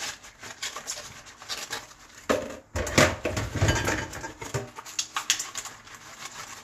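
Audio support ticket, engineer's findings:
No audible faults found; nothing to escalate.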